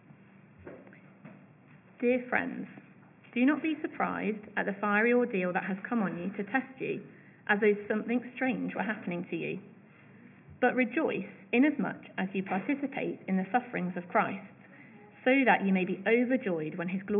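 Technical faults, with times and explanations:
Nothing technical stands out anywhere in the clip, so there's nothing to list here.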